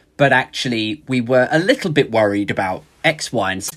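Speech clip with damaged data in the compressed stream from 3.67 to 3.73 s: corrupted frames make the decoder lose sync and emit a brief chirp, squawk, click or short hole before recovering.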